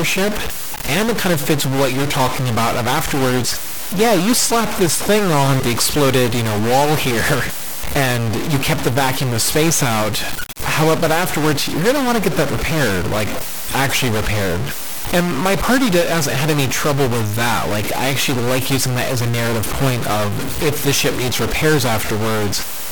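Harsh, buzzy distortion runs through the whole speech clip, with pauses filled by fairly loud noise, likely from a stuck bit worth roughly -15 dBFS.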